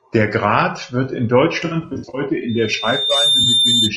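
Speech, with a rough, grainy quality from start to end. Noise fills the gaps between harmonics and the top band sounds thin and synthetic. The likely cause is low-delay AAC compression (AAC-ELD), and the damage fits a low bitrate of around 32 kbps. From 1.65 to 2.21 s, right after "wird in", there is AAC frame loss with concealment. About 280 ms of audio is lost, scattered over roughly 480 ms, with runs of up to about 70 ms. The decoder patches these gaps, so the passage sounds smeared, noisy or phasey. A second, brief loss at 3.43 to 3.46 s leaves a short smeared blip. A loudspeaker feedback squeal starts at 2.48 s and runs to 3.96 s. A single 3.6 kHz tone swells over under a second and ends up about 5 dB above the speech. The microphone is picking up its own loudspeaker, and the loop gain exceeds one at that frequency.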